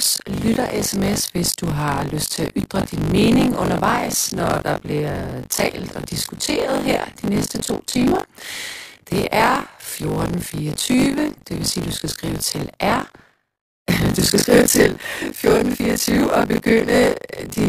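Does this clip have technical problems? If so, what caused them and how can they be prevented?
Yes. Buffer tearing runs through the whole speech clip as a robotic 50 Hz buzz, which points to a 20 ms buffer period. The writing side and the playback side of the ring buffer have drifted out of step. In each period, roughly a third of the audio is stale, from about 40 ms earlier, with hard joins at both edges. Unlike mains hum, the buzz stops in the pauses. Keeping the read and write pointers properly synchronised, with reliable underrun recovery, prevents it.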